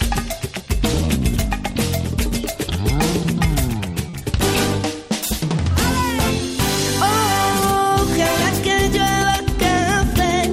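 At about 4.09 s there's a short stall from a late packet, running to roughly 4.15 s. The packet didn't turn up in time, the jitter buffer emptied, and the receiver filled about 40 ms by stretching the last bit of sound until the data came in. Nothing's actually lost. Playback picks up right where it left off, just 40 ms later than before, so you hear one sound hang a touch too long with a faint buzzy dip.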